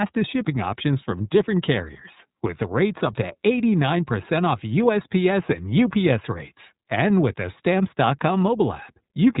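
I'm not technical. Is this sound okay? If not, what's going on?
No. The iLBC codec, an internet-phone compression, affects the whole clip, start to finish. It rebuilds the speech in separate 30 ms chunks and drops everything above 3.8 kHz, so the voice sounds muffled like a phone call, slightly rough and a bit artificial.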